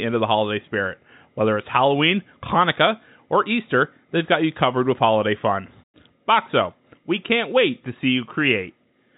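No technical faults occur anywhere in this speech, which comes through normal G.711 telephone coding with nothing above about 3.8 kHz.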